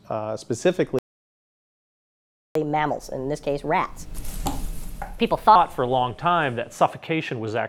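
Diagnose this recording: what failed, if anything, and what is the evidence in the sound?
Playback stage: a playback stall silences the output from 0.99 to 2.55 s, 1.57 s, likely a starved buffer. The waveform shows a flat, empty gap.

Catch-up at higher speed follows, 2.55 to 5.55 s: the backlog is resampled at 1.25x, raising pitch roughly four semitones. Spectrogram harmonics sit higher, then return.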